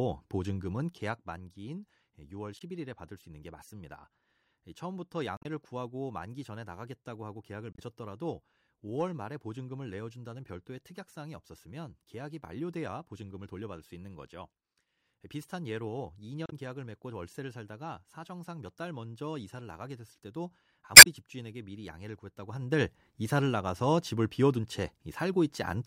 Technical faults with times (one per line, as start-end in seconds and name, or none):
2.57-2.62 damaged data in a compressed stream
5.37-5.45 damaged data in a compressed stream
7.71-7.79 damaged data in a compressed stream
16.44-16.53 damaged data in a compressed stream
20.93-21.07 damaged data in a compressed stream
22.34-22.90 zipper noise